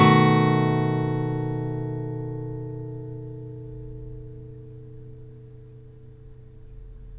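A recording of sounds, with no technical fault audible anywhere in it. Nothing in what can be heard points to a problem in how it was captured, processed or delivered.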